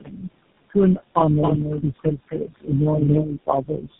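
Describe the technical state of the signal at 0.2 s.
Right at 0.2 s you're inside a stretch of speech cut by the noise suppressor, running from the start to 0.28 s. It mistook the onset for noise and pulled it down by up to about 17 dB, so it sounds swallowed.

Noise suppressor artifacts are there too. The background room noise, about 16 dB under the speech, is being pushed down by about 21 dB, so it sinks between the words and rises under them.

On top of that there's tandem speech coding. The speech has been re-encoded through a chain of coders, which fits three speech codecs in a row ending in GSM full rate. It sounds rough, muffled and warbly, with nothing above 3.8 kHz.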